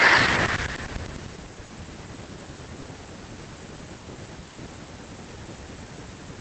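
Short concealed packet loss occurs twice, at 1.65 to 1.71 s and at 2.81 to 2.85 s. In each, a stretch of the call (about 40 ms first, then 20 ms) arrived too late for the decoder, so the receiver continued the preceding sound from its pitch, or as shaped noise, before crossfading into real audio. Both events come through as a brief smear or wobble in the speech, the first slightly longer. The call path's coding noise and its top cut-off near 8 kHz are present throughout.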